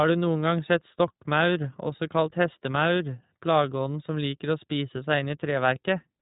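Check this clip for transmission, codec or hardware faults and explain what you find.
The speech sounds narrow and slightly rough throughout, with nothing above about 3.8 kHz and a plainly audible synthetic graininess. That points to the iLBC codec, where each 20 ms frame's excitation is coded on its own, which fits the 15.2 kbps mode.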